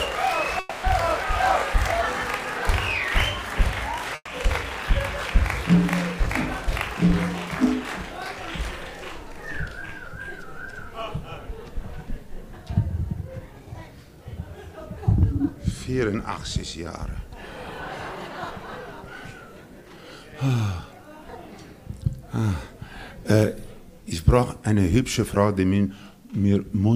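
At 0.59 s the sound stalls for about 240 ms, with its last moment drawn out as a fading buzz or hiss until 0.86 s, then picks up exactly where it stopped. This is a call audio freeze, likely caused by packets held up in transit until the jitter buffer ran dry. Unlike packet loss, nothing is skipped. The audio is only pushed later.

From 4.15 to 4.30 s a burst of packet loss leaves about 120 ms of concealed fill that weakens into roughly 40 ms of near-silence. When the sound returns, 120 ms of it is missing. That jump forward is what separates it from the freeze.

A jitter buffer speed-up runs from 13.05 to 13.88 s at 115% speed, trimming around 150 ms. A second, gentler one runs from 19.75 to 20.34 s at 109%, trimming about 70 ms. Both hurry the sound at unchanged pitch, without gaps or buzzes.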